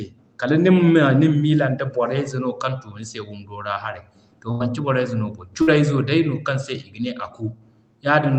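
A burst of packet loss occurs at 4.51 to 4.62 s and again at 5.62 to 5.69 s. Each time the receiver extends the last sound and fades it down, about 85 ms and 53 ms long, then resumes with roughly 80 ms and 60 ms of speech skipped.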